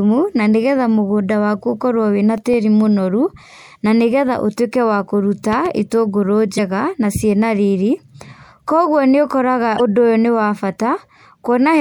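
CD scratch ticks run from 2.22 to 2.85 s: five brief ticks, the longest around a millisecond, where a disc blemish defeated error correction once per revolution. A loud pop comes at 5.53 to 5.68 s: two sharp pops roughly 5 dB above the speech, likely a voltage transient from a plug or switch added onto the signal. Damaged data in a compressed stream shows up as short blips at 6.55 s, just before "na ciĩna riri", and again at 9.76 s, where corrupted frames made the decoder lose sync.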